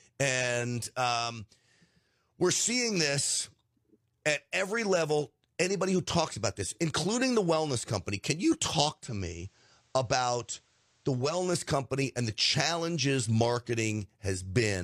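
From 8.92 s, after "wellness company can you", digital radio blending to analogue occurs: over about 278 ms the receiver cross-fades to the FM copy, adding faint hiss at unchanged level, then returns by 11.45 s, before "company and the challenges".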